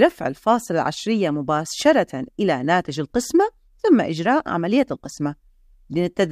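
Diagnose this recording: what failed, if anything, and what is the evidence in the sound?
Nothing in the signal points to a failure at any stage of the chain, with level, continuity and timing holding steady throughout.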